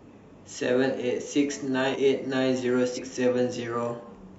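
Speech, with two spots where compressed frames were skipped: at 1.86 to 1.97 s and again at 2.93 to 2.99 s, the audio jumps forward by roughly a tenth of a second each time. Whole frames of the encoded stream were dropped, either missing from the file or rejected by the decoder as corrupt, so the missing span is a multiple of the frame length.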